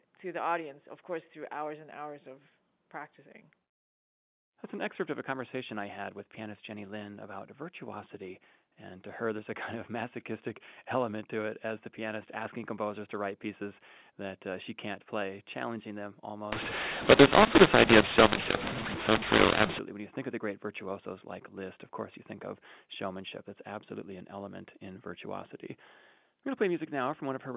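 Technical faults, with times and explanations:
16.52 to 19.79 s, mu-law and A-law mixed up: after "can't play challenging them", mu-law samples decoded as A-law scramble levels, giving harsh distortion; the waveform shows jagged amplitudes, and pauses on the spectrogram fill with broadband noise.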